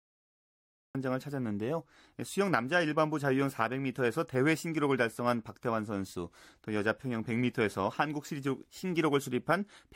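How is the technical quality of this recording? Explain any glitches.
The recording has one clear glitch: a cut-off start. From 0 to 0.95 s there is pure digital silence, and at 0.95 s the speech appears abruptly mid-sound, with no natural onset or fade-in. This happens when capture or streaming starts late, so the opening of the utterance is lost. On a waveform it shows as a flat line that jumps straight into the speech waveform. A spectrogram shows blank space ending in a sharp vertical edge.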